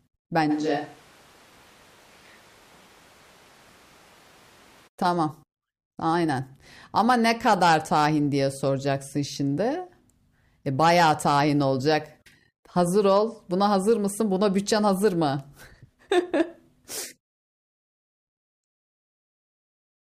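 From 0.52 s to 4.86 s the speech snaps to a roomy, bass-light sound, about 5 dB quieter, with room noise near 25 dB below it. This is likely a switch to a distant microphone: unlike added reverb, level, tone and noise all change together, abruptly, both ways.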